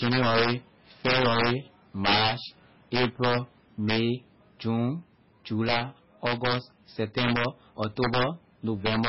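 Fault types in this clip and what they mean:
Integer overflow: The level was pushed about 9 dB past the integer limit without being capped. The loudest peaks, around one percent of the sound, wrap to the opposite sign. Each one flips across the full range, giving sharp cracks on speech peaks, harsher than clipping.
MP3 compression: The speech has heavy codec damage with a watery, swirly texture and smeared onsets. Nothing is left above 5.6 kHz, so it sounds dull. This is likely MP3 encoding at a very low bitrate, about 16 kbps, which starves weak frequency lines.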